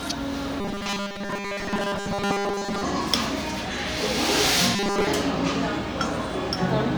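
From 0.61 to 2.83 s, and again from 4.76 to 5.08 s, the sounds take on a rigid, metallic buzz pitched at 200 Hz: robotic sound from repeated short buffers. The likely cause is new audio arriving too slowly, so playback loops 5 ms chunks, and most of the real material is skipped. Unlike a plain pitch shift or resonance, the buzz stays at a fixed pitch while loudness and texture still roughly follow the original.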